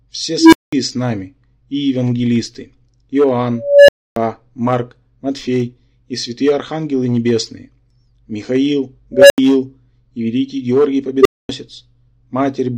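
An unstable filter erupts at 0.38, 3.57, 9.13 and 11.20 s. Each time a recursive stage runs away: a tone of roughly 300 to 500 Hz swells over 48 to 313 ms into clipping, then overflow cuts the sound for 80 to 280 ms.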